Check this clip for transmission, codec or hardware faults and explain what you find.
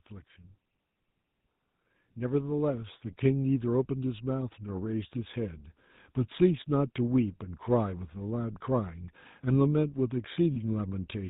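The clip is speech with three faults: a codec coloration throughout, a slow level rise early on, and a brief dropout near the end.

Throughout, the voice has a buzzy, gravelly roughness, and nothing comes through above 4 kHz. This is GSM full-rate codec damage, and it is plainly audible. The codec models the vocal tract as a filter and excites it with regularly spaced pulses that keep only every third excitation sample. That coarse excitation causes the grit, and the top end is cut off entirely. The sound fits a 13 kbps GSM full-rate link.

From 1.78 s to 5.68 s the whole sound swells steadily by about 7 dB, with the background rising together with the voice. This is automatic gain rising. The gain control judged the incoming level too quiet and turned its gain up gradually rather than in one step, so the loudness climbs over several seconds instead of jumping.

From 10.54 s to 10.57 s the sound briefly freezes into a rough, metallic ring. 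These are lost GSM frames. The decoder received a bad frame and filled the gap by repeating the parameters of the last good frame, which holds the sound in place instead of letting it move on. The length fits one lost 20 ms frame.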